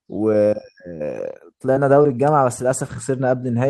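Speech with two short concealed packet losses, at 1.73–1.77 s and 2.03–2.06 s: about 20 ms of audio each time went missing, and the receiver's stretched last sound shows on a spectrogram as briefly frozen, smeared harmonics blending back into the real signal.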